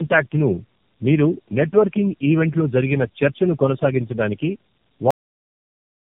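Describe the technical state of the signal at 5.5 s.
At 5.5 s the signal is digital silence. This is a cut-off end. The audio stops abruptly at 5.11 s, mid-sound, and stays silent to the end of the clip. The final buffers were never written out, so there is no natural decay, just a hard stop.

Up to that point the sound also carries tandem speech coding. It was decoded and re-encoded through three low-rate narrowband speech coders in a row, which fits AMR-NB links joined by G.711 stages. Each pass builds on the last one's damage. The result is rough, warbly and muffled, with nothing above 3.5 kHz.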